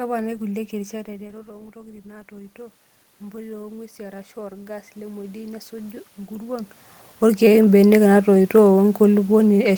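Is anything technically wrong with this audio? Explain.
Yes, there's automatic gain rising from about 1.72 s to 8.19 s. Around the one-second mark the talker seems to move back from the mic, and the level at the input drops by about 13 dB. The AGC reads that as a quiet signal and slowly pushes its gain up by about 12 dB over those six-plus seconds. You hear the speech and the room noise swell together, which is the giveaway that it's the gain moving, not just the talker.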